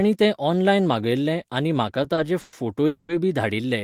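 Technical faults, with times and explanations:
2.14–2.27 s, short stall from a late packet: just after "मागयल्लें आनी म्हाका" a sound is held about 30 ms too long with a slight buzz or dip, because a late packet briefly emptied the jitter buffer.
2.41–2.55 s and 2.87–3.11 s, call audio freeze: the sound turns into a fading buzz or hiss for 120 ms, then 220 ms, and resumes where it stopped, likely from delayed packets draining the jitter buffer.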